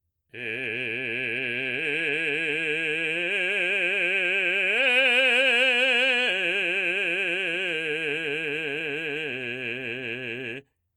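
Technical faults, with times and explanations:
Nothing in this music stood out as a technical fault on listening.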